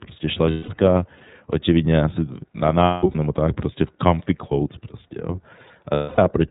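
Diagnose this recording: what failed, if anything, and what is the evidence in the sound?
The codec stage is the culprit here. The whole speech clip has the iLBC codec's narrowband sound: nothing above 4 kHz, and a rough, slightly synthetic edge that's plainly audible throughout. The texture fits iLBC's 13.33 kbps mode with 30 ms frames, where each frame's excitation is coded independently.

On the network side, you can hear lost iLBC frames three times, where the decoder fills each gap with a repeated pitch cycle plus noise that sounds like a held, buzzy vowel. The first runs from 0.51 to 0.71 s, just before "no očividně asi na". The second is patchy, spread from 2.85 to 3.15 s between "no očividně asi na" and "nebo tak prostě v", with a longest run of about 200 ms. The third runs from 5.94 to 6.19 s. Because iLBC frames stand alone, the sound recovers almost immediately after each gap.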